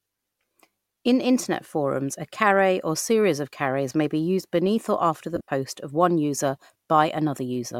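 Right after "beneath or after the", from about 5.36 to 5.48 s, you get lost LE Audio frames. About 90 ms of audio goes missing, scattered over 120 ms, which fits roughly a dozen 7.5 ms frames, with the longest gap around 50 ms. The LC3 decoder covers each hole by replaying the last spectrum with scrambled signs, so the speech smears into a brief noisy hiss that fades a bit before "of one user" snaps back.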